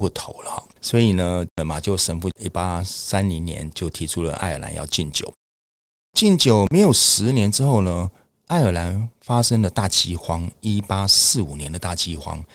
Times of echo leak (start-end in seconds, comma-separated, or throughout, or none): none